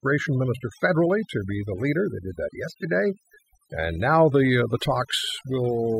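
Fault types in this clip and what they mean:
overdone noise removal: Throughout the speech, the gaps between phrases drop to an unnatural near silence dotted with twinkling, warbling specks. This happens because a noise reduction process was pushed too hard, pulling individual frequency bands far down or shutting them off whenever they sit close to its noise estimate. The quieter parts of the voice get caught in that and vanish too.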